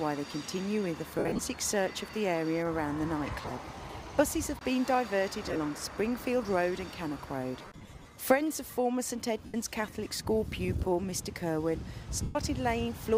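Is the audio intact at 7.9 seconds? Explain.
No. Between 7.59 and 8.05 s the stream suffers lost LE Audio frames: about 278 ms of audio is missing, scattered across roughly 450 ms in short bursts, the longest around 50 ms. In each gap the LC3 decoder repeats the last good spectrum with scrambled signs, so tonal content turns into a brief noisy smear. A plain dropout would leave silence or a click. Here the runs are too short for the concealment to fade to silence, so the passage stays a noisy smear rather than dying away.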